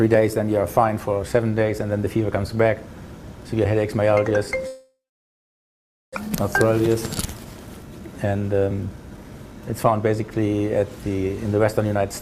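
At 4.67 s a long network dropout likely begins and runs to 6.19 s: the last sound is stretched into a fading buzz, then about 1.2 s of near-silence, shown as smeared repeating bands thinning to a blank floor. When audio returns, roughly 1 s is missing.

Two jitter buffer speed-ups follow, 6.30 to 6.95 s at 109% and 7.38 to 10.35 s at 113%. They cut short pitch-period pieces to reduce the buffered delay. The audio sounds hurried at unchanged pitch, with harmonic bands at the same height but events packed closer together.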